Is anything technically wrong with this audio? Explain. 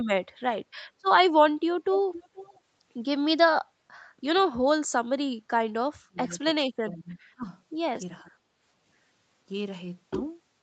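Yes, there are two kinds of fault in this speech.

Echo leak at 1.92 to 1.98 s and 2.14 to 2.58 s. A loudspeaker's echo canceller likely let part of its microphone pickup through. A copy of the speech returns about 0.47 s late, roughly 10 dB below the speech and then fainter, around 20 dB below.

Speech suppressed in double talk at 4.17 to 4.22 s, 6.02 to 6.46 s, 6.89 to 7.47 s and 8.22 to 8.33 s. Both ends were talking, so the echo canceller likely ducked the talker along with the echo. The speech sinks by a few decibels at the shortest dip and by some 25 dB in the two longer ones around 6 and 7 s.

Nothing above 8 kHz comes through. That is the normal call path band limit, which fits an Opus codec running at wideband.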